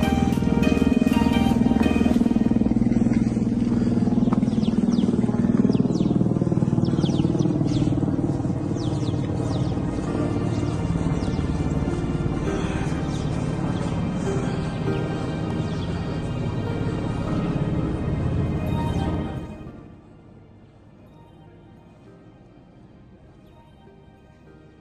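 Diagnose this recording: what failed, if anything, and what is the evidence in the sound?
A gain change in the driver or buffer stage was applied in unsmoothed 2 dB steps, about 15 per second, producing zipper noise from 19.10 to 20.02 s. Each jump clicks, so a ticking zip rides on the sound as it drops roughly 25 dB.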